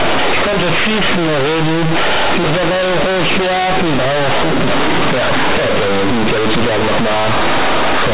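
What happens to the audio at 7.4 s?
At 7.4 s the speech is loud and buzzy, with strong noise filling the pauses, as it is for the entire clip. This is companded audio read as linear: mu-law bytes are played as plain 8-bit samples without expansion, so every sign change swings across half the range and quiet sounds become as large as loud ones.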